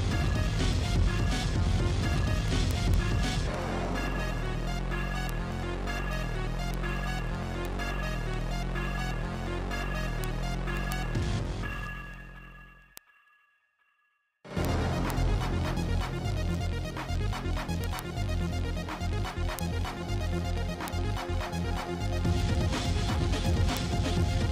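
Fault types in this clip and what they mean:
Word clock ticks: the receiving device reads the digital link on its own unlocked clock, drifting by roughly 300 ppm. One sample slips at each clock crossing, giving sharp ticks about every 70 ms, around 300 in all, from 0.13 s to 24.45 s.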